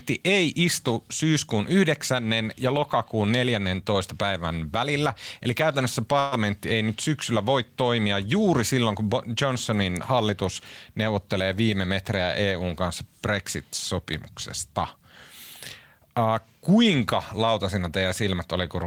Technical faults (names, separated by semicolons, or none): burst of packet loss